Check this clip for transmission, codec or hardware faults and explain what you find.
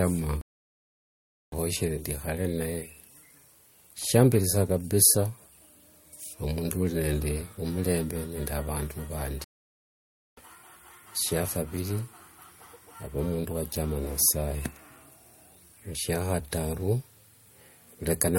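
Two stream reconnects, at 0.41–1.55 s and 9.44–10.41 s. The connection broke and the player restarted its decoder mid-stream, so silences of about 1.1 s and 0.9 s give way to speech resuming roughly 1.5 s and half a second further on. Unlike a plain dropout, material is skipped rather than continuing.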